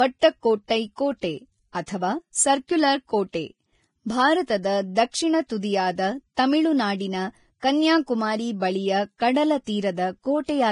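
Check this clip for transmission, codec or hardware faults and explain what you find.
One codec fault runs through the whole speech clip: heavy Vorbis compression is the likely cause. Nothing reaches above 10.5 kHz, and the coarsely quantised treble turns detail into grainy hiss, consistent with a low bitrate near 27 kbps.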